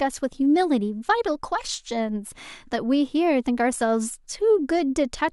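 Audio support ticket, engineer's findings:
Short skips in speech at 1.74 s and 3.73 s, about 2 s apart. Each drops roughly 10 ms, with the two sides butted together and no gap of silence. Regular spacing points to audio missing between chunks, likely in a recorder or processing stage handling 2 s blocks that loses a sliver at each handover. Check the block-boundary handling and buffer hand-off in the capture chain.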